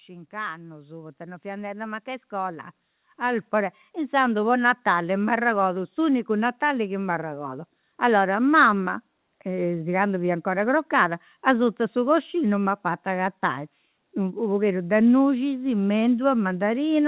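Automatic gain rising runs from 0.06 s to 4.59 s. Having judged the incoming level too low, the gain control keeps turning itself up across those four and a half seconds, lifting the level by about 17 dB in total. The speech and the room noise behind it swell together in one slow, continuous ramp rather than a step, all within a narrowband call signal that carries nothing above 4 kHz, consistent with G.711 A-law at 64 kbps.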